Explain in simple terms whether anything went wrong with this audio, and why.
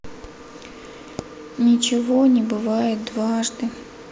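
Nothing went wrong here.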